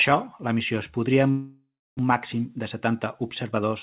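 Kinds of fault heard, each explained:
Long network dropout: after "la missió es podria", about 0.6 s of speech is lost, likely to packet loss; a fading buzz then a blank band shows from 1.3 to 2.01 s.
Jitter buffer speed-up: from 2.59 to 3.53 s, about 40 ms of pitch periods are cut, so speech runs 3% faster; harmonics keep their spacing while segments shorten.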